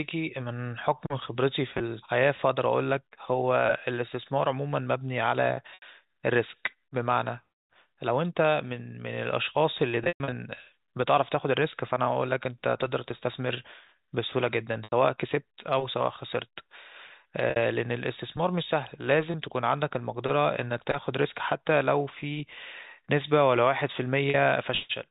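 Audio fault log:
1.78–1.80 s, 5.74–5.82 s, 10.04–10.32 s, 14.84–14.92 s, 17.50–17.56 s, 19.32–19.34 s and 24.30–24.34 s: packet loss with pitch repetition. Each short gap sounds like a briefly held, buzzy tone. At 10.04 s, 200 ms goes missing in bursts across 280 ms, with the longest run 120 ms; this one fades toward silence, then the speech cross-fades back. The receiver fills missing audio by looping the last pitch period. Gaps in 20 ms steps fit 20 ms packets.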